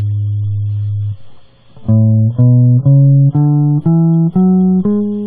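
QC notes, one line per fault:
0.00–3.77 s, adaptive stream starting at a low bitrate: the player opened on a very low-bitrate rendition to get playback going fast, then switched to a better one once it had measured the connection. Until 3.77 s the music has nothing above 5.1 kHz and heavy coding artefacts, which points to a stream around 16 kbit/s. At 3.77 s the quality jumps, with no gap, to a full-range sound consistent with roughly 128 kbit/s.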